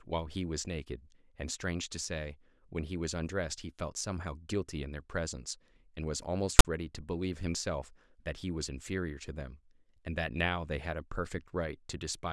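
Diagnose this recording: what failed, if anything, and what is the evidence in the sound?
Storage or file parsing failed: file tags were played as audio from 6.59 to 6.65 s, a hard-edged, one-sided text rasp ending in padding silence, unlike a random click or dropout.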